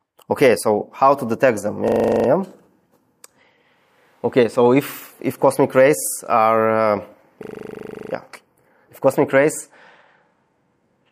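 A system hang loop occurs twice, from 1.88 to 2.28 s and from 7.44 to 8.12 s: the system briefly froze while the sound hardware kept replaying one 40 ms stretch of its buffer. Each event is a rapid stutter repeating at 25 Hz, and the audio then resumes with essentially nothing skipped.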